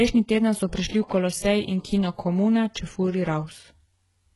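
From start to finish the speech carries heavy coding damage, most likely HE-AAC compression at a very low rate, which fits a bitrate around 12 kbps. The upper range is rebuilt from copied lower bands, so s sounds turn gritty and lispy and the harmonics above the crossover do not line up with those below. Unlike a plain low-pass or MP3 dulling, the treble is present but synthetic, and it stops dead at about 11.5 kHz.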